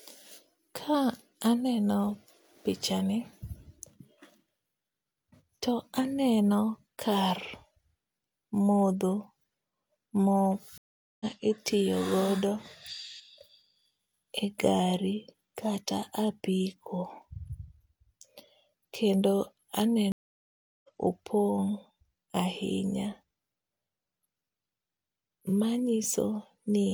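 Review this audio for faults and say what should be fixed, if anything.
The connection dropped twice and the player reconnected each time, starting a new decoder partway into the live stream. That is a stream reconnect. At 10.78 s the speech cuts to silence for 425 ms and picks up again at 11.26 s, and at 20.12 s a 715 ms gap runs to 20.90 s. Both times the speech resumes about half a second further on than where it stopped, so a short stretch is missing rather than merely delayed. Prevent it with a larger client-side receive buffer and a resume-from-offset reconnect, so that playback continues from the exact point where the connection was lost.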